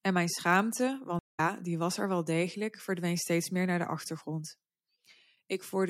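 A speech clip with a stream reconnect: after "mijn schaamte" the sound goes silent for 165 ms (1.19–1.4 s), then resumes at "die was er wel" about a fifth of a second further on. Unlike a simple dropout, the restarted decoder skips ahead rather than continuing where it stopped.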